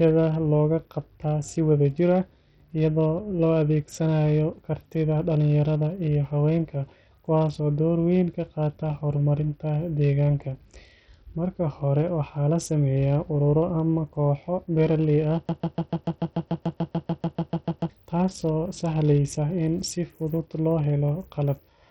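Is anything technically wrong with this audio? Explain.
Yes, there are two faults in this speech clip.

Throughout the clip, the top end flickers and drops away, and a gritty, aliased grain clings to the sound. This is heavy Bluetooth SBC compression. The damage is most likely caused by a starved bit pool that leaves the upper sub-bands with few bits, which fits a low rate of around 64 kbps.

From 15.49 to 17.90 s, a broken-record loop repeats a 146 ms fragment 17 times, back to back. It gives a rapid stutter, and the speech that should have filled those 2.4 seconds is lost. The likely cause is a stalled stream that kept resending its last buffer.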